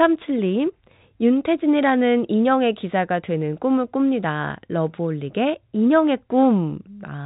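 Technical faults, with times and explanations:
No technical faults detected.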